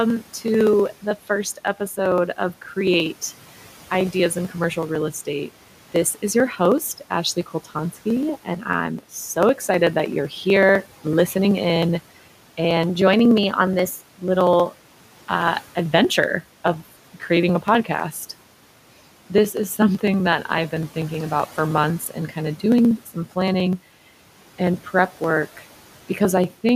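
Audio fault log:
0.10–26.69 s, periodic USB or driver dropouts: Something blocks the USB bus or audio driver every 63 ms, and each time roughly a millisecond of audio is skipped outright rather than filled with silence. The repeats run the length of the clip, around four hundred in all. Because the waveform jumps straight across each gap, the joins produce a steady, evenly spaced ticking that is audible only while speech is present. Between phrases only the room noise remains, about 22 dB below the speech.
12.87–14.08 s, drift correction step: Playback suddenly runs 5.47% fast for just over a second. Speed and pitch rise together by about 92 cents, close to a full semitone, so the speech sounds abruptly hurried and raised in tone. The likely cause is clock-matching software that changed the playback rate in a single step to refill or drain its buffer, instead of adjusting gradually.
22.98–23.36 s, speech cut by the noise suppressor: The noise suppressor mistook part of the speech for background noise and turned it down along with the room sound, by about 11 dB at the deepest point. 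Roughly 100 ms of speech within this span is affected. Those fragments sound swallowed or faded, as if briefly pulled away from the microphone.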